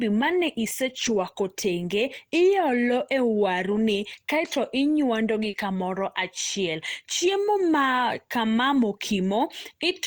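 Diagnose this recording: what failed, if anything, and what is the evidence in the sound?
Network stage, recovered by the codec. The first fault is lost packet rebuilt from error correction. Just after "ma ne", from 0.89 to 1.19 s, the speech turns rough and noisy for about 160 ms, which fits a run of several lost packets. Shorter rough patches sit at 2.59 to 2.61 s, 3.71 to 3.77 s, 5.53 to 5.55 s and 8.73 to 8.75 s. No gap opens. The following packets carried low-bitrate copies, and the Opus decoder played those instead.

The second fault is short concealed packet loss, also at the network stage. From 5.49 to 5.55 s, just before "kamoro achiel", about 40 ms of audio never arrived in time. The receiver filled the hole by extending the preceding sound, so the audio smears briefly before blending back. Its last 20 ms overlaps a rebuilt frame, so real audio did not return until about 5.55 s.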